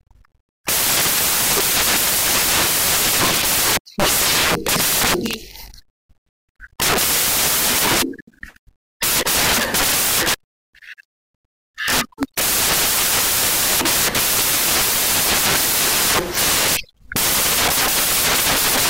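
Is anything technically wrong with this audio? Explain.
Yes. Throughout the speech you've got samples built from the wrong bytes: the reader is assembling each sample's bytes in the wrong order or alignment, so the jittery low bits end up dominating. It comes out as loud, harsh broadband noise, close to white on the louder passages.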